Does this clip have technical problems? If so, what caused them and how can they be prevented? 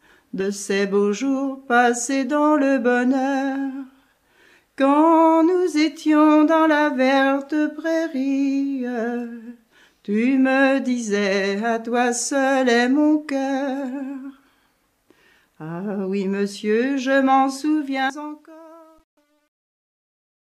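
Yes. Compressed frames skipped at about 0.40 s and again at about 18.10 s: whole frames of the encoded stream never reached the output, either lost from the file or rejected by the decoder as corrupt. Judging by the jump, the first gap is roughly three frames, about 100 ms of audio, and the second roughly four, about 150 ms. Both point to 32 ms frames. Sending the stream with error protection or retransmission, and checking file integrity before playback, would prevent this.

Truncation distortion on a fade runs from about 17.75 s to the end at about 20.55 s. The fade-out was applied in a stage that kept only about 10 bits and added no dither. As the level dropped toward the smallest step, the waveform collapsed into coarse square steps, so the tail turns gritty, worst from about 18.54 s onward. Running fades at high internal precision and dithering on any reduction in word length would avoid it.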